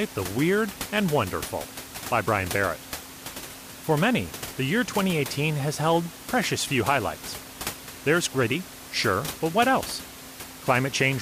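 Nothing goes wrong anywhere in this speech recording, and the only thing in the background is the ordinary noise of the room, sitting about 14 dB below the talking.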